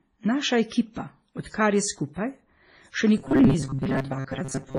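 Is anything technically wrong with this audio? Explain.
Yes, two things. The first runs through the whole clip: the speech carries two different flavours of codec damage at once. That's most likely transcoding between lossy codecs. The sound points to a low-rate MP3 around 24 kbit/s that was then re-encoded as WMA at around 48 kbit/s. The second encoder spent its bits faithfully preserving the first one's smearing and added its own, while the MP3's low cut-off survived the whole chain.

The second runs from 3.18 s to the end, about 4.78 s. The voice turns into a stiff, metallic buzz pitched at 134 Hz that only loosely tracks the speech. The likely cause is robotic sound from repeated short buffers: audio wasn't arriving fast enough, so the playback side kept looping its last chunk, roughly 7.5 ms, which fits that 134 Hz pitch. About half of that stretch is repeats rather than real audio.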